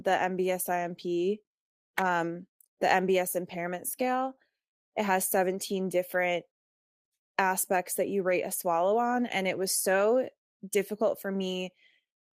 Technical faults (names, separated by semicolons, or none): none